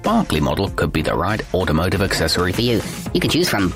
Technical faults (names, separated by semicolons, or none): section at the wrong speed